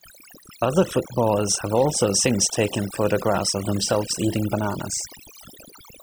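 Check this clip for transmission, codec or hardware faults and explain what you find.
The fault is in processing rather than transmission: overdone noise removal runs through the whole speech clip. A noise reducer set too aggressively pulls individual frequency bands close to its noise estimate down to near zero, taking the quieter parts of the voice with them. Between phrases the background drops and breaks up into twinkling specks.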